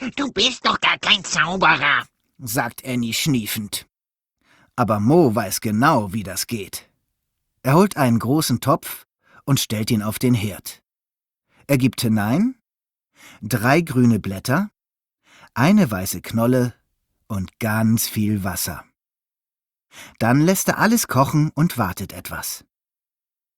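For the first 2.0 s the speech sounds dull and smeared, with nothing above about 8.2 kHz and noticeable codec artefacts, then at 2.0 s it suddenly turns clear and full with no gap. This is an adaptive stream starting at a low bitrate. The player began on a cheap version of the stream to start quickly, which fits Opus at around 16 kbit/s, and switched to a better one, consistent with about 64 kbit/s, once it had gauged the connection.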